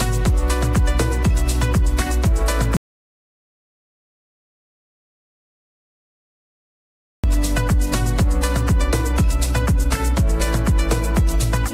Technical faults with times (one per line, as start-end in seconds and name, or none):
2.77-7.24 audio dropout to silence